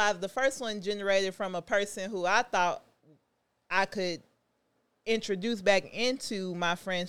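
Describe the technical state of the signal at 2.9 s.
The speech at 2.9 s is intact, with no audible fault at that point.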